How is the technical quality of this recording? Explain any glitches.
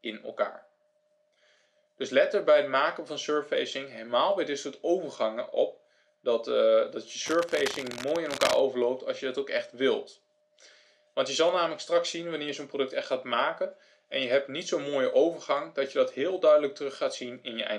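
One glitch stands out. Cable scratch noise runs from 7.26 to 8.60 s, a stretch of dense, uneven scratching and rustling laid over the sound at roughly 10 dB below it. It likely comes from a worn cable, connector or control carrying a DC voltage being moved, so its contact resistance fluctuates rapidly and injects those noise bursts.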